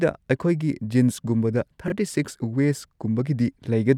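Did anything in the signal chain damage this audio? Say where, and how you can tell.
Yes. At the buffer stage, chunks arrived out of order: between 1.88 and 1.92 s one 20 ms chunk was written a chunk late, so two neighbouring slices swap places. Nothing is lost, but the speech briefly jumbles across three hard joins.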